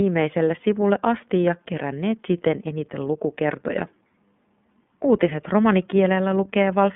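Throughout, the speech has passed through the iLBC codec, coding each frame's excitation independently, which fits 30 ms frames at 13.33 kbps. The band is confined to about 150 Hz to 3.5 kHz, so the speech sounds muffled and plainly rough and synthetic.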